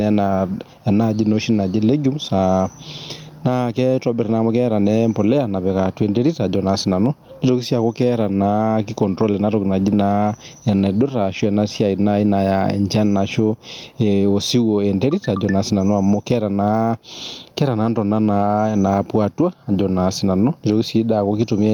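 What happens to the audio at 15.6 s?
At 15.6 s the speech is caught in the gain pumping that runs through the whole clip. The gain is pulled down on each loud sound, swinging by around 15 dB, so loud and quiet passages sit squashed close together. The likely cause is input gain set far too high with a fast limiter clamping it down. On a waveform the envelope looks flattened at the top.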